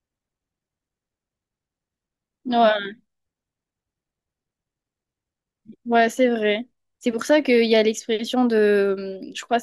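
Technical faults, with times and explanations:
No technical faults can be heard anywhere in this speech.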